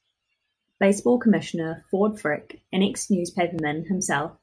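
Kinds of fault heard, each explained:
No technical faults can be heard in this recording.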